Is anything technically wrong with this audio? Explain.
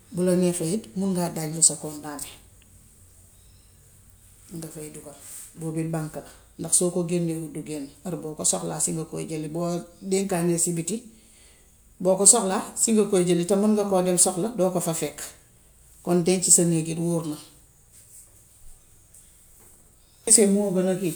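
No, nothing technically wrong can be heard in this speech recording, and the signal stays intact and stable throughout.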